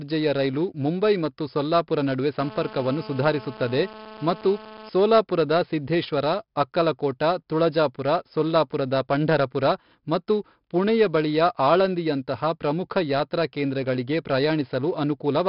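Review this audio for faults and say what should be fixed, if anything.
4-bit ADPCM compression runs through the whole speech clip as heavy gritty hiss that tracks loudness, with smeared attacks and nothing above 5.3 kHz, consistent with a stream near 44 kbps. On a spectrogram, noise fills the band beneath each loud syllable, and everything stops sharply at 5.3 kHz. To prevent it, record or export with a higher-resolution codec instead of 4-bit ADPCM.

GSM phone buzz runs from 2.39 to 4.89 s, between "ಮುಂಬೈ ಮತ್ತು ಸೊಲ್ಲಾಪುರ ನಡುವೆ" and "ಸೋಲಾಪುರದ ಸಿದ್ಧೇಶ್ವರ ಅಕ್ಕಲಕೋಟ ತುಳಜಾಪುರ". It is a steady raspy buzz about 17 dB under the speech, coming from an active call's 217 Hz transmit bursts being rectified in the audio circuit. A spectrogram shows stacked harmonic lines every 217 Hz, and the waveform shows a regular pulse train. To prevent it, keep phones away from the recording chain or switch them to flight mode.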